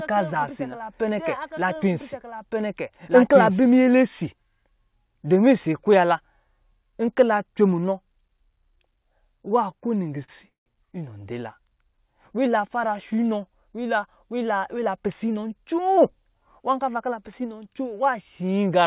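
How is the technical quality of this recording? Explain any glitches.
The recording has three audible faults, all in a speech clip carried over a call path whose G.711 coding removes everything above 4 kHz.

From the very start until 3.66 s there is a doubled audio track: a second full-band copy of the speech runs about one and a half seconds behind, at roughly the same level. It has no reverberant tail or room colouring and cuts off abruptly at 3.66 s. The likely cause is a second capture path or an edit holding two misaligned copies.

From 10.24 to 10.3 s there is a short stall from a late packet. A packet arrived after it was due and the jitter buffer emptied, so the receiver stretched the last sound by 40 ms before resuming where it left off. It is heard as a briefly held sound with a slight buzz or dip, with nothing lost.

From 10.5 to 10.68 s there is a call audio freeze, likely caused by packets held up in transit draining the jitter buffer. 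The last sound continues as a fading buzz or hiss, then about 140 ms of silence, inserting a 160 ms gap before the speech resumes without loss.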